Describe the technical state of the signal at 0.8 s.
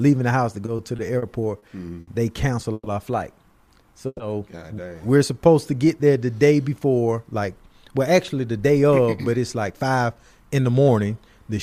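At 0.8 s the signal is in repeated stalls (stutter), from 0.65 to 1.64 s. Late packets drained the buffer five times. Stretched sound fills them, so it drags and stutters.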